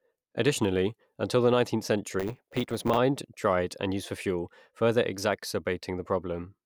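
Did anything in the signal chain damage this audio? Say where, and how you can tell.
Yes, there's a block size mismatch (truncated) at the buffer stage from 2.19 to 2.99 s, just before "dried and used for". You hear a 100 Hz buzz and the speech runs about 1.07 times fast with its timbre unchanged, which fits 512-sample blocks each losing their tail.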